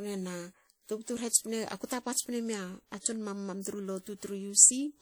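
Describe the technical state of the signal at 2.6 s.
At 2.6 s the speech carries plainly audible WMA compression, likely, across the whole clip: long transform blocks smear ringing, washy quantisation noise, which fits a 48 kbps rate. Unlike bandlimited MP3, content still reaches about 20.1 kHz.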